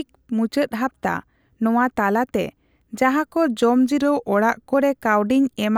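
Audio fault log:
4.01–4.74 s, drift correction step: a clock-matching stage likely slowed playback by about 6.3% in one jump to rebalance its buffer, so just after "ᱱᱚᱣᱟ ᱛᱟᱞᱟᱛᱮ ᱡᱟᱦᱟᱠᱚ" the speech drags and drops roughly 112 cents, a little over a semitone, before snapping back to normal pitch and pace.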